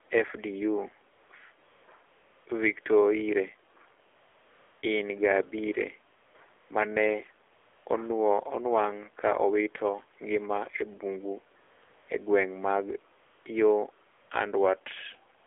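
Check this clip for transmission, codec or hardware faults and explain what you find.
Two faults are present: the whole clip has passed through a low-rate mobile speech codec, and its pauses are filled with generated noise.

AMR narrowband mobile codec, throughout: the speech was carried by AMR-NB at 7.4 kbps, which rebuilds each 20 ms frame from a vocal-tract filter and a few excitation pulses instead of sending the waveform. The line passes only about 300 Hz to 3.5 kHz, so the speech is thin and boxy, with no air above that. At this low bit rate the coding damage is plainly audible as a buzzy, synthetic edge on the speech.

AMR comfort noise, at twelve points from 1.1 s to the end at 15.46 s: the phone classed these stretches as silence and stopped sending speech frames, so the receiving end substituted noise built from a rough description of the background's level and spectrum. The gaps run from about 75 ms to 740 ms, the longest at 4.08 to 4.82 s. 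Each one brings in a smooth, steady hiss that switches on and off at the gap edges, replacing the real background.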